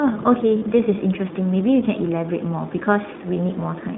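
Speech, coded with the iLBC codec throughout. Nothing above 3.7 kHz gets through, and the voice sounds slightly rough and synthetic, which fits the 15.2 kbps mode. Lost iLBC frames cause brief buzzy, held-vowel gaps at 0.58 to 0.63 s and 3.34 to 3.37 s. The decoder repeats the last pitch cycle, and the voice is right again almost at once.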